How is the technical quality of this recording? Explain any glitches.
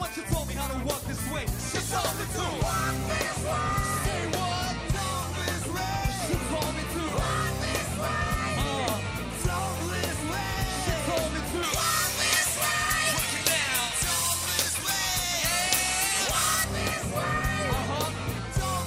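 One fault is audible. From 11.63 to 16.64 s the sound turns thin, bright and hissy: pre-emphasis left on, treble lifted about 11 dB at 10 kHz without the matching de-emphasis, which fits a J.17 curve.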